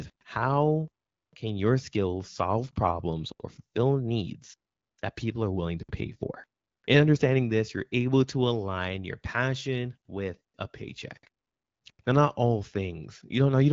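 Nothing stood out on listening to this speech, which comes through AMR-WB wideband coding at 12.65 kbit/s with light coding damage and no content above about 7.5 kHz.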